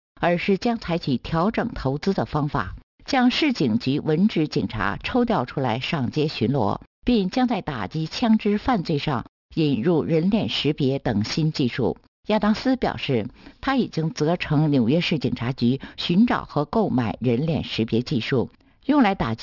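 Aliasing runs through the whole clip. The sound appears to have been resampled down, which fits a drop from 44.1 kHz to 12 kHz, without a low-pass filter first. Content above the new 6 kHz limit folded back below it, landing at wrong, unrelated frequencies roughly 20 dB under the main signal. The result is a gritty, metallic edge on bright, hissy sounds, and the spectrum stays dense right up to the 6 kHz edge instead of tapering off.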